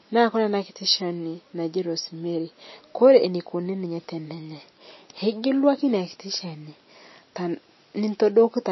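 Speech, with plainly audible MP3 compression damage throughout. Nothing is present above 5.8 kHz, and weak spectral detail sounds watery and swirling as it drops in and out from frame to frame. The likely cause is MP3 encoding at a low bitrate, which fits roughly 27 kbps.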